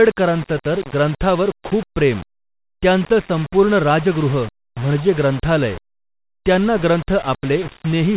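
Low bit depth without dither runs from start to finish: the speech sounds coarse and grainy, likely from rounding to about 5 bits with no dither. The error tracks the signal at around 20 dB below it, roughening quiet passages, with nothing above 4 kHz through the call path.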